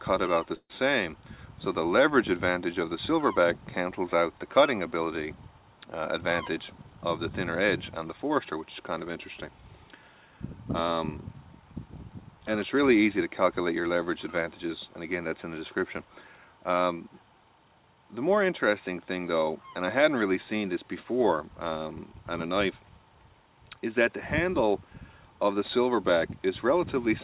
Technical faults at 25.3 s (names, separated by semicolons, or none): none